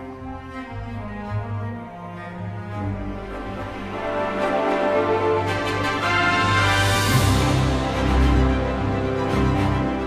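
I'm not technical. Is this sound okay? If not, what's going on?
Yes, the sound is technically fine, with nothing going wrong in the recording or playback at any point.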